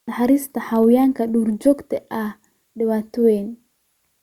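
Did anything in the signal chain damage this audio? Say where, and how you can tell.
No, nothing in this chain damaged the audio.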